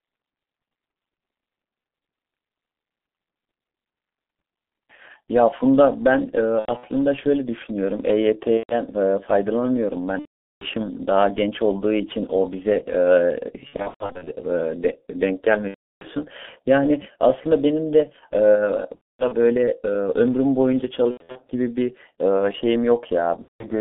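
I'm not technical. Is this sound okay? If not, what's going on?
No. The whole recording has been squeezed through the G.723.1 codec, an old internet-phone speech format. It keeps only a narrow phone-line band, roughly 200 Hz to 3.6 kHz, so the speech sounds muffled and hoarse with smeared consonants. Unlike simple background noise, this roughness is part of the voice itself.

There is also VoIP packet loss concealed by the speech codec. Pieces of the call went missing, and the decoder filled each gap by stretching the last sound into a fading buzz or noise, which goes silent when the gap runs longer. This happens at 6.59–6.87 s, 8.58–8.75 s, 10.19–10.66 s, 13.67–14.33 s, 15.68–16.07 s, 18.95–19.34 s, 21.11–21.40 s and 23.42–23.66 s.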